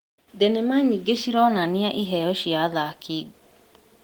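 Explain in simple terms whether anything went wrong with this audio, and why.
Nothing went wrong here: the speech has simply been passed through Opus voice compression, which leaves only a light touch on the sound and keeps the highs all the way up to about 20 kHz, so there's no fault to point to.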